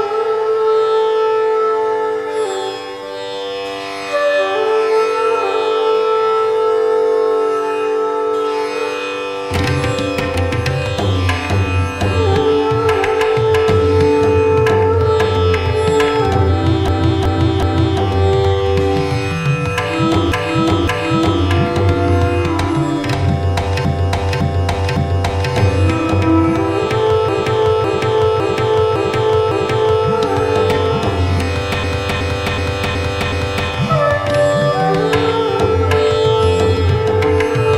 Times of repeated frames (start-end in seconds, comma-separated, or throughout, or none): 16.88-18.00, 20.32-21.43, 23.85-25.52, 27.29-30.07, 31.84-33.69